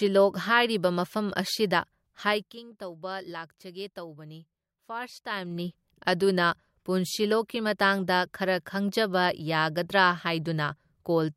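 From 2.18 to 2.60 s, the level of the speech drops by about 15 dB. It falls in 2 dB steps, around twenty a second, with no smoothing between them. Each jump leaves a small click, so a ticking zipper noise rides on the speech during the fade. The same happens in reverse from 5.25 to 5.71 s, as the level climbs back by about 15 dB.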